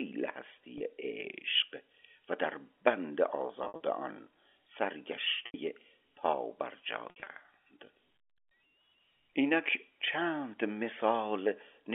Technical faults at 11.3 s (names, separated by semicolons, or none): none